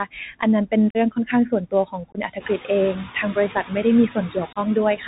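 Throughout the recording the speech is muffled and grainy, with nothing above 4 kHz, scratchy s sounds and a fine hiss beneath it. That is the Bluetooth CVSD headset codec, whose one-bit up-or-down steps at 64 kHz cannot follow loud, bright sounds and plainly damage the signal. Over the same span the background sinks between words and rises under them. These are noise suppressor artifacts, from a suppressor that turns down each band it judges to be steady noise, frame by frame.

From 0.05 to 3.84 s, soft consonants and word endings fade or seem swallowed, adding up to about a second of affected sound, with dips of about 19 dB at worst. This is speech cut by the noise suppressor, which mistook quiet parts of the speech for background.

Inside that stretch, abrupt holes break the sound at 0.90 to 0.97 s, a 45 ms gap, and at 2.12 to 2.18 s, a 22.5 ms gap. Each time the sound returns briefly quieter. 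This is unconcealed Bluetooth headset packet loss: several short voice packets never arrived and were filled with silence or an idle pattern rather than patched over. Around 2.5 s the room noise rises by about 16 dB but stays about 13 dB under the speech.

From 4.15 s to the end the suppressor again clips quiet speech, roughly a third of a second in total, with dips of about 11 dB. Within this, another unconcealed Bluetooth headset packet loss cuts a 30 ms hole at 4.53 to 4.57 s, with the same hard edges and quieter return.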